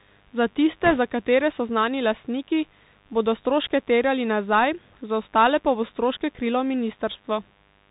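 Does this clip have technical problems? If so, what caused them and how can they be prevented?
Yes. A steady mains buzz runs throughout, about 35 dB below the speech. Switching spikes at 50 Hz add harmonics reaching several kilohertz, which shows as evenly spaced horizontal lines on a spectrogram. Prevent it with shielded cabling, a separate supply away from dimmers, and a proper ground.

The Bluetooth CVSD headset codec is plainly audible throughout. The one-bit adaptive coding, consistent with a 64 kbit/s CVSD link, cuts everything above 4 kHz, leaves scratchy sibilants and a granular hiss, and shows a hard spectral ceiling. Prevent it by recording on a wideband link or wired microphone.

Bit errors on a Bluetooth voice link appear from 0.84 to 0.98 s, just before "za katere so znani". Flipped bits at a rate of a couple of percent produce rushing crackle without loud clicks, visible as a brief broadband smear rather than sharp spikes. 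Prevent it with a shorter, unobstructed radio path and less interference.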